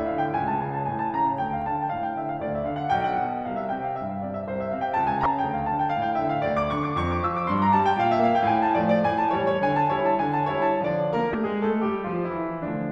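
Damaged data in a compressed stream occurs twice in the music, at 5.23 to 5.26 s and at 11.31 to 11.35 s. Corrupted bytes make the decoder misread frames and lose sync until it finds the next valid header, producing a brief glitch about 30 ms long.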